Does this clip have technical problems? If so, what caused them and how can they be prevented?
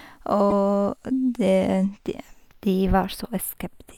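Yes. Channels drifting apart runs through the whole recording. The two channels appear to come from devices on separate clocks with a mismatch of roughly 30 ppm, so the delay between them slides steadily, reaching around a tenth of a millisecond by the end. When the channels are summed to mono, that shifting offset moves the comb-filter notches slowly across the spectrum, giving the speech a gradual flanging colour. To prevent it, record both channels on a single interface or lock the devices to a shared word clock.

From 0.49 to 0.52 s there is a brief break where the speech skips forward and the next moment comes out corrupted for a fraction of a second. This is likely a broken MP3 bit reservoir. MP3 frames borrow spare bytes from earlier frames, so when a frame is dropped, the following frame reaches back for its data and reads the wrong bytes. The span fits a single frame of about 24 ms. 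To prevent it, cut or splice MP3 streams only with tools that respect reservoir dependencies, or edit the uncompressed audio before encoding.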